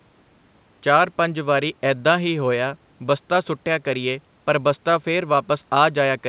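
No technical faults heard.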